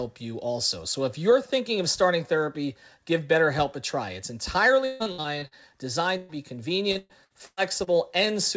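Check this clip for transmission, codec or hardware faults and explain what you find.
Packet loss on the call path causes two stretches of choppy, robotic speech and one short held-over gap. The audio stops at 8 kHz, which fits a wideband call codec such as G.722.

Between 4.85 and 5.54 s, and again between 6.92 and 7.90 s, the speech turns choppy and stuttering, with pieces dropping out. This is repeated packet loss (robotic sound). In the first stretch there are six gaps, the longest 150 ms, and about half of it is filled-in sound. The second has five gaps, the longest 119 ms, with about a third concealed. Each time a packet failed to arrive, the receiver stretched the last sound over the hole, and the next loss followed before the stream could settle.

At 6.17 to 6.32 s there is a single short smear where the speech holds and fades, then jumps ahead. This is a burst of packet loss of about 120 ms. 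The receiver repeated the last sound across the gap and faded it rather than going silent. When the stream resumes, the audio carries on from further along, so the part that fell inside the gap is gone.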